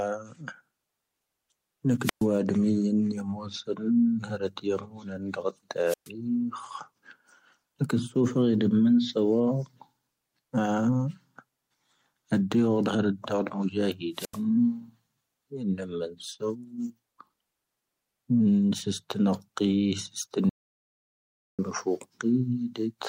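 A speech recording from a wireless microphone shows three wireless microphone squelch dropouts, at 2.00–2.26 s, 5.85–6.10 s and 14.13–14.41 s. In each one, a short swell of hiss rises as the FM radio link weakens, then the receiver's squelch mutes the output for about 121 ms, 124 ms and 85 ms respectively before the voice returns. On a spectrogram, each dropout shows a brief broadband haze of noise, then a narrow, nearly empty vertical gap. On the waveform, the noise fuzz sits just ahead of a near-flat stretch. Separately, at 20.49–21.59 s the sound stops for about 1.09 s, and this is an audio dropout to silence, likely a lost input or a brief mute while recording continued. The gap contains no room tone at all, so on the waveform it is a flat, silent line, and on the spectrogram it is a fully black block with hard edges on both sides. Whatever was said during it is lost.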